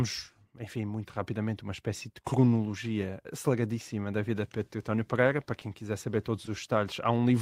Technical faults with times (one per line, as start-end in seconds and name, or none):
5.59-5.63 short concealed packet loss
6.45-6.49 short concealed packet loss